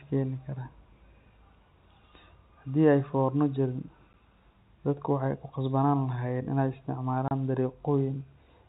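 Speech over G.711 telephone coding, with nothing above 4 kHz, is cut twice by packet loss filled with silence: a 10 ms hole at 4.13 s just after "forna jirin", and a 30 ms gap from 7.28 to 7.31 s, which fit one and then three 10 ms packets. Concealment would smear over the loss, but these gaps drop to dead silence with hard edges.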